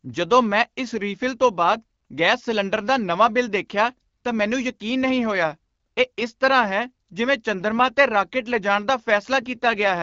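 AMR rate drop from 9.42 s to the end at 10.02 s, right after "'ਤੇ ਰਾਕੇਟ ਲਿਜਾਣ ਦਾ": the AMR-WB speech codec falls from 12.65 to 8.85 kbit/s, giving fewer bits to speech detail. The speech turns rougher and more synthetic, with bandwidth unchanged and no gap.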